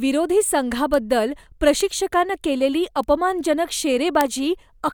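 Speech carrying four bit error spikes, sharp isolated ticks at 0.94, 1.81, 3.03 and 4.21 s, where a flipped bit throws what looks like a single sample far off and back. Each shows as a one-sample needle on the waveform and a thin full-height vertical line on the spectrogram.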